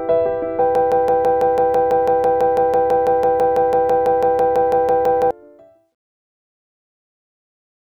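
A broken-record loop runs from 0.75 s to 5.31 s: a 165 ms fragment of the audio repeats exactly, back to back, 28 times, in place of whatever should have played there, which is lost. The cause is likely a stalled player, encoder or stream resending the last chunk it held. On a waveform the stretch shows an identical shape tiled end to end; a spectrogram shows the same pattern stamped at a regular 165 ms spacing.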